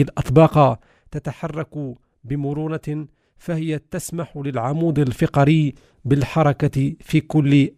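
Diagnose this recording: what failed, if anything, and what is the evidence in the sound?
Nothing in this speech recording points to a failure at any stage of the chain. Level changes arrive as smooth, gradual rides in gain, the way a fader moves, rather than as jumps or steps.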